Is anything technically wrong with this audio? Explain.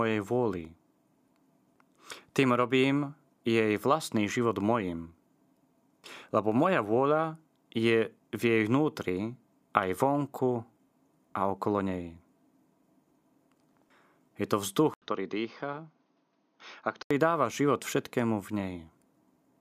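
Yes. From 14.94 to 17.11 s, the input likely switched to a poorer device. After an 80 ms gap, the speech loses everything above 6.5 kHz, turns duller and boxier, drops a few decibels in level, and carries a faint new background noise until it clears.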